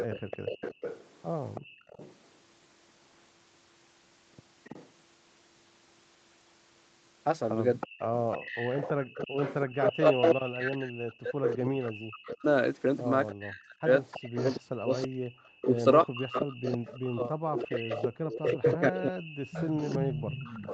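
From the start to 2.15 s, a faint delayed copy of the speech trails the original by 327 ms, well below the direct speech. This is an echo leak, likely from a loudspeaker on the far end whose echo canceller let part of the playback back into its microphone. A fixed 327 ms lag, rather than a smeared tail, separates it from room reverberation.

Between 0.28 and 1.86 s the room sound dips, for roughly a third of a second in total and by up to about 27 dB at the deepest. This is background gated by the echo canceller: it turned the microphone down hard while the loudspeaker played, then released it. The speech itself is not what drops, only the surrounding ambience, which is what separates this from a network dropout.

A brief, quieter echo returns at 4.64 to 4.88 s with the same 327 ms delay. From 7.8 s to the end it comes back louder and continuous, only somewhat below the direct speech.

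From 8.43 to 20.4 s, while that echo runs, the speech of the talker on the loudspeaker side is repeatedly pushed down or cut out in pieces, roughly five seconds altogether, at the worst by around 40 dB. This is speech suppressed in double talk, likely because the canceller could not separate the talker from the echo and attenuated both. It differs from the background gating because the speech, not just the room tone, is what disappears.

One more short background gate, of about 15 dB, falls at 18.09 to 18.14 s. Throughout, the audio stops at 8 kHz, which fits the call's Opus wideband path.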